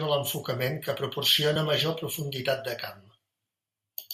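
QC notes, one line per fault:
1.53–1.57 s, damaged data in a compressed stream: a short glitch cuts through the speech for about 40 ms. Part of the compressed data at that point was corrupted, so the decoder misread those frames, lost sync and searched for the next valid frame header, producing the brief disruption.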